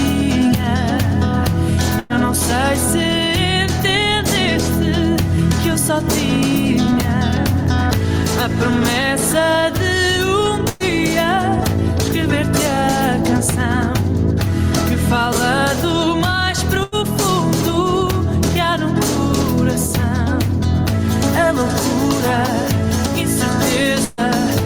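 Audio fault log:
throughout gain pumping: A level control set with too much gain, likely a fast limiter or compressor working on an input driven too hot, clamps down each time a loud sound arrives and lets go in the gaps. The background rises between loud moments and dips under them, swinging by roughly 5 dB, so loud and soft parts sit closer together than they should and the whole sound feels squashed and breathing.
1.99–2.13 s, 10.69–10.83 s, 16.83–16.95 s, 24.05–24.20 s burst of packet loss: Runs of packets failed to arrive in time. The receiver covered each gap by extending the last sound and fading it, for 102, 108, 89 and 129 ms respectively. The result is a brief held, dimming smear instead of new material. Playback then picks up further on, with 60 ms missing in the first three and 120 ms in the last. In the first three, the playout timing also shifted by 42, 48 and 29 ms.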